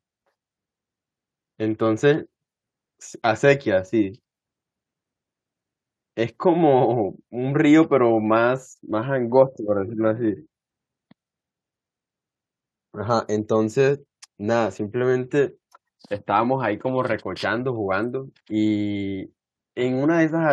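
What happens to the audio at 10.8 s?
At 10.8 s the speech continues cleanly, with no dropout, click, distortion or other fault at that point.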